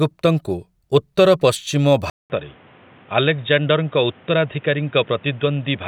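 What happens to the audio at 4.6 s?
At 4.6 s the input has switched to a poorer device, since 2.10 s, likely another microphone or headset profile. After a 200 ms silence, speech loses everything above 3.8 kHz, sounding dull and boxy, about 5 dB quieter, over a faint new noise floor.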